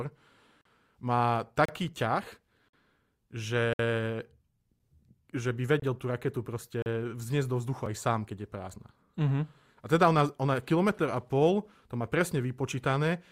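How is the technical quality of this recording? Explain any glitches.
Brief hard-edged dropouts to silence repeatedly interrupt the speech. This is a gap between stream segments, occurring at 0.61, 1.65, 2.69, 3.73, 5.80, 6.82 and 7.86 s, roughly once per second in line with 1.0 s segments. Segment timestamps don't quite abut, so the player inserts about 4 to 59 ms of silence at each boundary. No audio is lost, but each hole cuts into the sound with hard edges.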